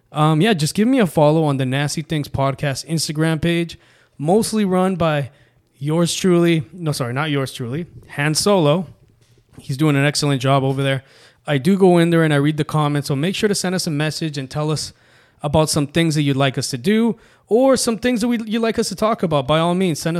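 No technical faults can be heard anywhere in the recording; the speech signal stays continuous and steady throughout, with nothing breaking into it.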